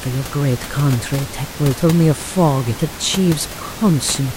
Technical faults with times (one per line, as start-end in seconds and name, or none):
1.40-1.45 compressed frames skipped